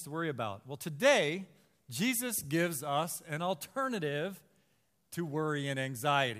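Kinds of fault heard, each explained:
No technical faults can be heard anywhere in this speech recording.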